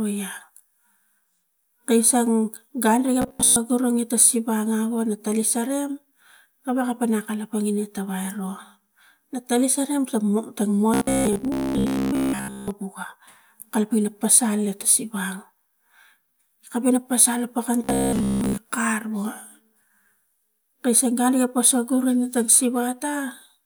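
From 3.22 to 3.56 s, 10.94 to 12.72 s and 17.84 to 18.58 s, the speech turns into a rigid, metallic buzz at about 67 Hz, the robotic sound from repeated short buffers. This is likely from a 15 ms chunk being replayed while most of the real audio is skipped.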